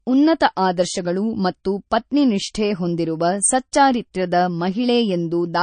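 Throughout, likely MP3 compression starved of bits, as around 34 kbps would be: treble stops dead at 9.4 kHz and the speech sounds plainly watery.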